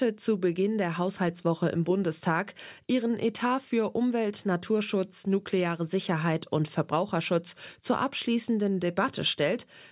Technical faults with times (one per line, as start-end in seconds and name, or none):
none